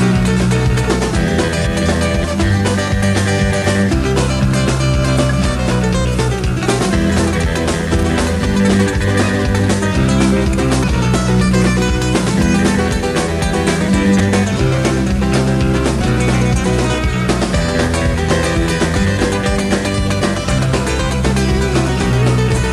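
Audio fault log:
2.23–2.25, 10.82, 14.19, 16.00 and 18.95 s: damaged data in a compressed stream. Corrupt bytes make the decoder misread a frame and resync, producing a brief chirp, squawk, click or short hole of about 20 ms or less. On a spectrogram each appears as a thin vertical break. The waveform shows a discontinuity.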